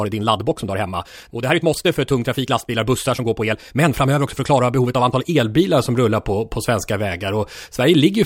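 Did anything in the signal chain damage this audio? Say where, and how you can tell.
Yes. From 0.0 to 5.4 s the speech runs at 1.4 times normal pace and then drops back abruptly, while the pitch stays put. That's a time-stretched section, likely from software squeezing the audio to fit a length by dropping short pieces.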